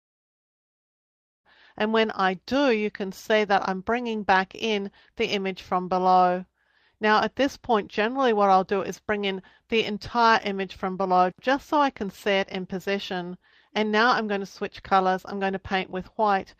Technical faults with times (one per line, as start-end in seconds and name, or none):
none